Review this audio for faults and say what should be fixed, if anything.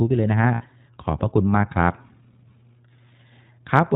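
The iLBC codec narrows the speech throughout. Nothing above 4 kHz survives, and the voice sounds rough and synthetic. This fits iLBC at 15.2 kbps with 20 ms frames. Use a wideband codec, or a higher-quality one, on this path.

Lost iLBC frames cause a gap from 0.54 to 0.62 s. The decoder repeats the last pitch cycle with noise, giving a held, buzzy vowel. This fits three lost 20 ms frames. The voice recovers at once. Reduce packet loss on the network, or add redundancy or forward error correction.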